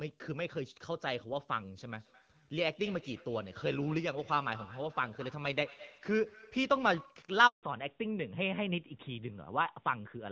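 From 1.89 s to 7.31 s, two devices in the same room sit on one call and create a feedback echo between two devices. One device plays back what the other's microphone sent, that microphone picks it up again, and neither echo canceller can remove sound from the other device. The speech returns roughly every fifth of a second, peaking about 19 dB below the direct speech, each repeat thinner and more ringing.

At 7.47 s a handover gap opens as the phone moves the call to another network and no speech frames arrive during the switch. The speech fades within a few tens of milliseconds and stays silent for 160 ms until the new link starts at 7.63 s.

From 7.63 s to the end, the call falls back to narrowband. The lighter HD Voice coding before this point is consistent with AMR-WB at around 12.65 kbit/s, and afterwards the sound is consistent with AMR-NB at around 12.2 kbit/s. Everything above 4 kHz is gone, so the speech turns duller and rougher than before the gap.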